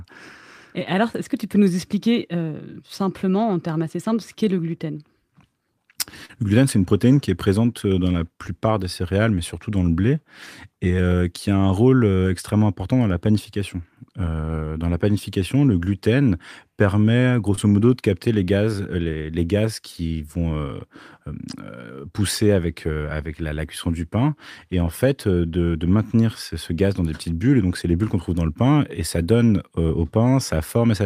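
A brief smear at 6.25 to 6.31 s, just before "le gluten c'est une", and another at 17.55 to 17.59 s, between "panification le gluten permet" and "modo de capter les", are short concealed packet loss. About 40 ms and then 20 ms of the speech arrived too late to play, so the receiver bridged each gap by extending the preceding sound for roughly 36 and 22 ms before easing back into the real signal.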